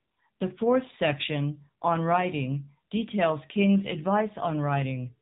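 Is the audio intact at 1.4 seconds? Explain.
No. At 1.4 seconds, as throughout the whole clip, the speech has passed through the AMR narrowband mobile codec, which resamples to a telephone band and rebuilds the voice from a vocal-tract model excited by a few pulses per subframe. Nothing above 3.8 kHz survives, so the speech is muffled and boxy, and the coarse excitation gives a plainly audible buzzy, synthetic edge that fits a low AMR-NB mode around 7.4 kbps.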